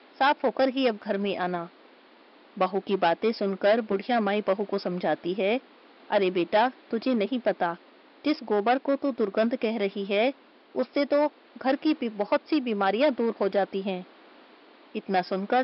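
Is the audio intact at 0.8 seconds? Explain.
Yes, at 0.8 seconds the audio plays through cleanly, with no dropout, click, distortion or other fault at that moment.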